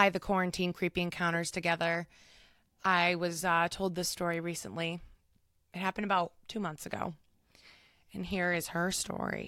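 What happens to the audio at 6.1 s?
Nothing goes wrong at 6.1 s; the speech carries on intact through that moment.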